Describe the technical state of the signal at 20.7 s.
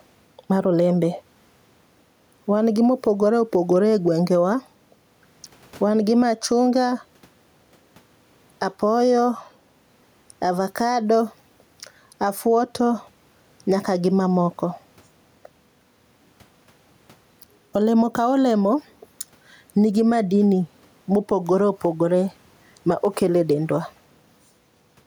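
At 20.7 s the speech sounds squashed, with the level ducking by roughly 5 dB under each louder syllable, as throughout the clip. This gain pumping likely comes from the microphone gain being set too high, with a fast limiter or compressor pulling it down on every peak. The faint room noise, about 44 dB below the speech, is part of the recording.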